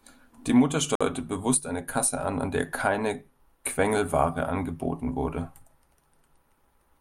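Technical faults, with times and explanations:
0.95–1.01 s, gap between stream segments: a hard-edged hole of about 52 ms cuts into the speech just before "bewusst eine", where two stream segments' timestamps fail to meet and the player fills the space with silence, though no audio is lost.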